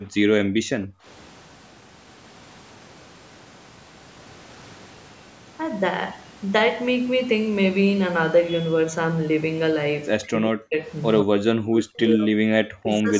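At the very start, while the far end's loudspeaker was active, the echo canceller clamped the microphone, so the background is gated by the echo canceller. From 0.00 to 0.12 s the room sound sinks by about 12 dB. From 0.45 to 1.05 s the gate bites much harder, cutting the background by about 40 dB for around half a second, so the ambience briefly vanishes before the canceller releases and it returns.

Near the end, the speech is suppressed in double talk, likely because both sides spoke at once and the canceller, unable to tell the local talker from loudspeaker echo, turned everything down. The speech dips sharply from 10.19 to 10.77 s and again from 11.23 to 12.37 s, each time by roughly 40 dB, affecting about a second in the second stretch. A shallower dip of roughly 20 dB follows from 12.82 s to the end at 13.19 s. The call's microphone processing, which leaves nothing above 8 kHz, sits underneath all of this.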